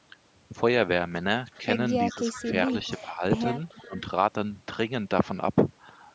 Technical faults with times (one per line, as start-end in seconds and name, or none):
1.51-1.58 echo leak
1.61-1.66 speech suppressed in double talk
2.10-2.42 echo leak
2.12-3.23 speech suppressed in double talk
2.70-3.01 echo leak
3.55-4.00 echo leak
3.82-3.96 speech suppressed in double talk